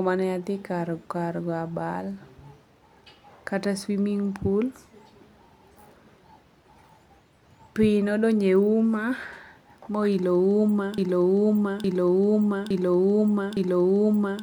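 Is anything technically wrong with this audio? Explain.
Yes. From 10.98 s to the end of the speech clip there is a broken-record loop: a fragment of about 0.86 s replays four times back to back. The likely cause is a stalled player, encoder or stream that kept resending the last chunk it held, so the audio meant for those seconds is missing. Unlike an echo, each pass is an identical, full-level copy with no decay. Unlike a brief stutter, it continues until the clip ends.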